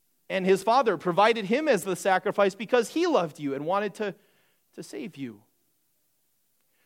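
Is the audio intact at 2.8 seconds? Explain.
Yes, at 2.8 seconds the speech plays through intact, with no dropout, click, distortion or other fault to be heard at that moment.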